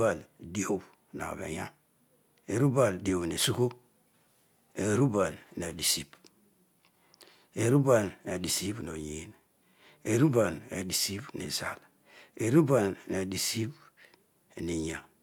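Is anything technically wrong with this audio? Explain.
No, the speech signal shows no technical faults anywhere in the recording.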